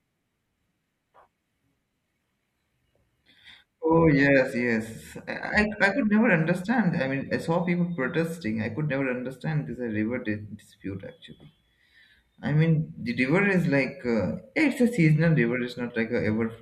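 A speech recording with no technical faults to report.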